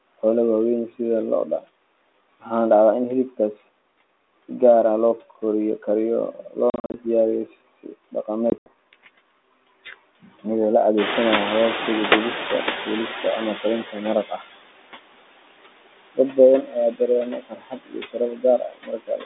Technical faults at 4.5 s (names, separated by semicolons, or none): noise suppressor artifacts